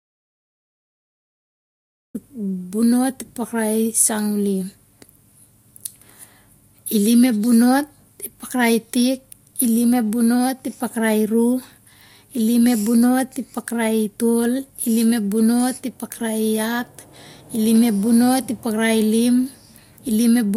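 From the very start until 2.15 s the clip is in an audio dropout to silence. The file opens on plain silence, and the speech then arrives abruptly, already in mid-flow. The likely cause is a lost input, such as a disconnected device, a failed link or a mute left on, while recording carried on. What separates this from an ordinary pause or a noise gate is the absence of any room tone or hiss in the gap.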